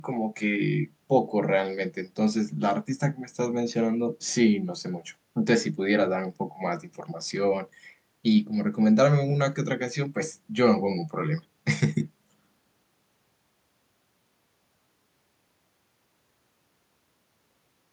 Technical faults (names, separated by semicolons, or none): none